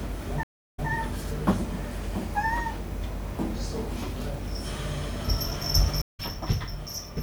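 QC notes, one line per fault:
0.43–0.90 s, stream reconnect: the connection dropped and a fresh decoder restarted after a 307 ms silence. The server resent buffered data, so the sound resumes 157 ms earlier and repeats a short stretch.
6.02–6.20 s, stream reconnect: the connection broke again and a new decoder picked up the live stream after 129 ms of silence. The audio resumes about 150 ms later, so a brief stretch is skipped.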